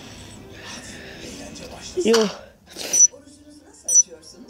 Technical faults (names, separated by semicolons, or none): none